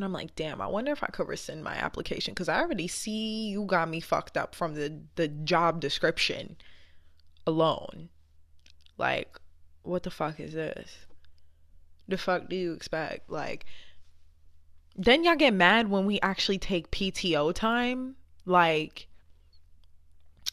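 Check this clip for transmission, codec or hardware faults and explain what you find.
Nothing stood out on listening to this speech recording; no transmission, codec or hardware problem could be heard at any point.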